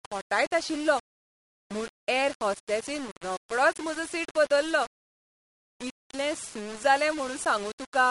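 Low bit depth without dither runs through the whole speech clip. Grainy distortion follows the voice, sitting about 15 dB below it, likely from rounding to roughly 5 bits. MP3 compression is also present throughout. Nothing sounds above 11.2 kHz, and watery, swirly artefacts with smeared consonants fit a low bitrate, around 43 kbps.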